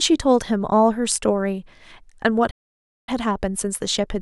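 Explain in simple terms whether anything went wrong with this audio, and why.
At 2.50 s the speech cuts out and stays silent until 3.09 s, a gap of about 0.57 s. This is a playback stall: the output stopped feeding sound to the speakers for a moment. The likely cause is that the player ran short of incoming data, or the part of the software responsible for playback was held up by something else.

From 3.09 s to the end, the speech runs about 1.15 times faster than normal, yet the pitch stays the same. This is time-compressed catch-up: having fallen behind during the gap, the player trims away tiny slices of audio and blends the joins together to recover lost time.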